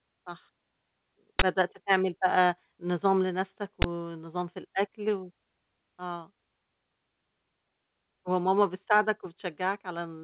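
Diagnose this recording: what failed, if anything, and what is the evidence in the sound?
Driver or buffer: an uninitialised buffer produces loud 23 ms noise bursts at 1.39 s and 3.82 s, unwritten memory played as samples, which fits a 1024-sample buffer.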